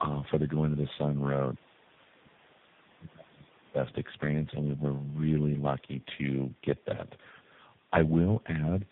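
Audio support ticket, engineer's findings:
Tandem speech coding, throughout: the call crossed several coded links, apparently four separate speech coders in a row with AMR-NB as the last. Each re-encode starts from the previous coder's damaged output, so errors stack. Result: rough, muffled, warbly speech, band-limited with nothing above 3.8 kHz. The layered roughness points to a chain of mixed codecs rather than one.

Other side's voice leaking through, 2.5 to 2.58 s: a brief scrap of far-end audio, about 80 ms, very faint, well below the talker. Likely cause: the echo canceller missing a short stretch of loudspeaker pickup at the microphone, letting a fragment of the returned signal through.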